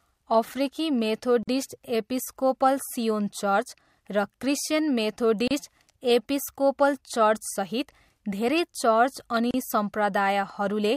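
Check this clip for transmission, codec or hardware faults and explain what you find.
The speech has one recurring fault, a gap at a join of encoded pieces. Short silences cut the sound at 1.43 s (45 ms, just before "एपिस्कोपल सियोन"), 5.48 s (32 ms) and 9.51 s (32 ms), four seconds apart. Pieces encoded separately were joined untrimmed, leaving encoder delay and end padding in.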